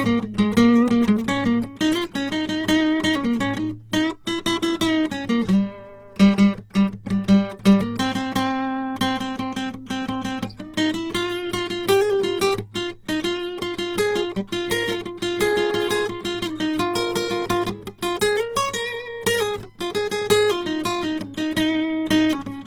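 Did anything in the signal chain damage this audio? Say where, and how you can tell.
Yes, at the codec stage, across the whole clip: the music sounds grainy, rough and noisy in its tones with little swirling, which points to likely Opus compression in its CELT music mode at a very low bitrate, around 16 kbps, filling starved bands with folded or noise energy while bandwidth reaches 20.3 kHz.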